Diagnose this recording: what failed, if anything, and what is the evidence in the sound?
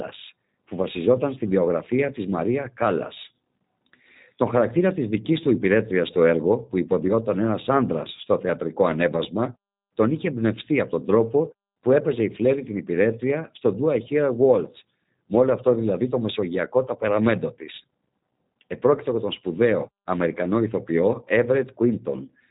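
Codec stage: G.729 coding throughout. Nothing passes above 3.8 kHz. Speech sounds rough and synthetic, as rebuilt from filter and pulses, which fits 8 kbit/s.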